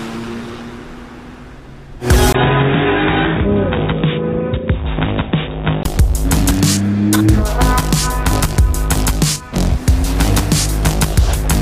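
From 2.33 to 5.85 s the input likely switched to a poorer device. After a brief dropout of about 20 ms, the audio turns dull and boxy with nothing above 3.8 kHz, gets somewhat quieter, and carries a faint new background noise. Full clarity returns at 5.85 s.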